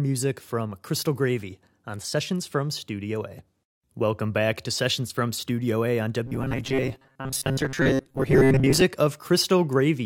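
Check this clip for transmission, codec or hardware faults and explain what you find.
One fault here. From 6.26 to 8.82 s there's robotic sound from repeated short buffers: a rigid 134 Hz buzz, likely from audio arriving late and about half of it being filled by repeating roughly 7.5 ms chunks.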